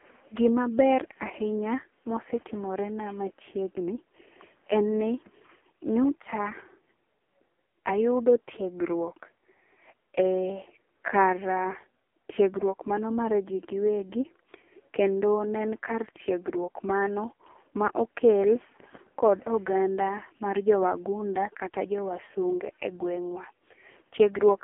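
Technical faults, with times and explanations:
Throughout, AMR narrowband mobile codec: the speech sits in a phone band of 250 Hz to 3.4 kHz, with nothing above 3.7 kHz, and sounds heavily buzzy and synthetic. That points to a low AMR-NB mode, around 5.15 kbps, rebuilding the voice from a vocal-tract model and sparse pulses.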